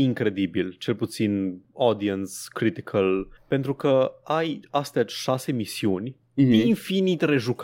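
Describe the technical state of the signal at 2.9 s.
At 2.9 s the speech signal is intact, with no audible fault at that moment.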